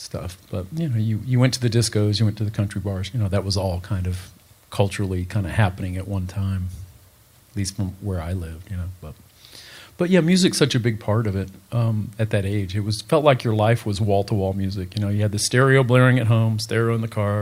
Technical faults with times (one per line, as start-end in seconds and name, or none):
none